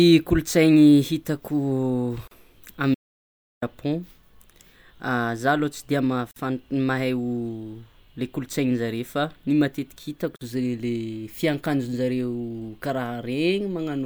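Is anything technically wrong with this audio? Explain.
Yes, there are two kinds of fault in this speech.

Gap at a join of encoded pieces: short silences at 2.28–2.31 s (about 38 ms), 6.31–6.36 s and 10.36–10.41 s (49 ms each), recurring every 4 s. Separately encoded segments were joined with encoder delay and end padding left in, so the speech stops briefly and resumes where it left off. Each shows as a narrow blank column with slightly smeared edges.

Audio dropout to silence: from 2.95 to 3.62 s, about 675 ms, the speech cuts out completely, with no room tone, then returns mid-flow. Whatever was said in that span is lost. The likely cause is a lost input while writing continued. The waveform is flat and the spectrogram shows a wide empty band.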